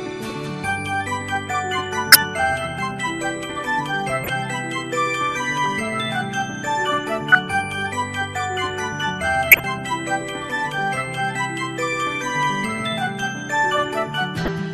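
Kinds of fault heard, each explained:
corrupt frame decoded: Some compressed frames reached the decoder with flipped bits, and it played them anyway. Misread gains and codes threw energy onto the wrong frequencies for the span of a few frames each time. The result is short blips and noise bursts at 2.12, 4.24, 7.32, 9.51 and 14.45 s, each lasting about 30 to 90 ms. Three of them are the strongest, and those at 4.24 and 14.45 s sit roughly 10 dB lower.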